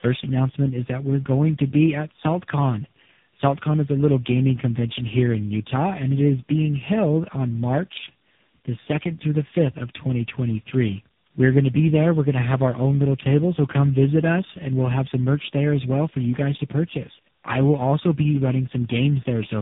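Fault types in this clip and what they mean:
Tandem speech coding: The speech passed through about three low-rate speech coders in a row, likely ending in AMR-NB. It sounds rough, muffled and warbly, with nothing above 3.8 kHz.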